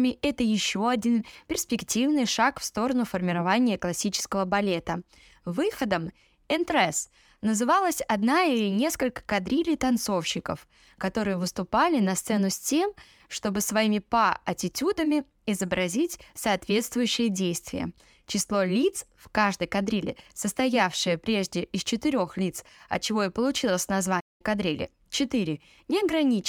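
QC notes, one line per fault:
24.20–24.42 s, playback stall: the player was likely starved of data or had its output thread blocked, so nothing reached the output for 0.2 s. The speech drops out abruptly mid-flow into a short hole of silence, then carries on once playback recovers.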